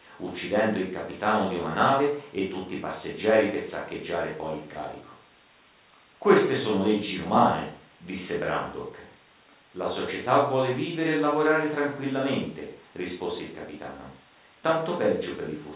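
No technical faults can be heard in this speech.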